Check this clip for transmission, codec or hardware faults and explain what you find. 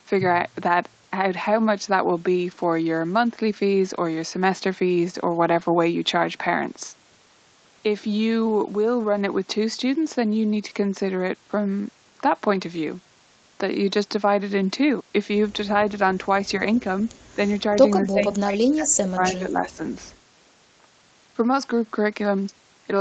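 Two kinds of fault appear late in the speech, both pointing to the echo control at one end of a call. The audio's top end stops at 8 kHz, consistent with an Opus call path.

At 16.75 s and again at 19.66 s, a short, faint repeat of the voice slips in 235 ms behind the original. The first is very quiet, about 30 dB down, and the second is louder, about 20 dB down. This is likely echo leak: loudspeaker sound reached the microphone and the echo canceller failed to remove all of it, so a delayed copy was sent back.

From 18.04 to 19.8 s the voice sinks away, by around 20 dB at its deepest and for roughly one and a half seconds in total. This is likely speech suppressed in double talk: both sides spoke at once, and the echo canceller, unable to tell the talker from loudspeaker echo, turned the outgoing voice down.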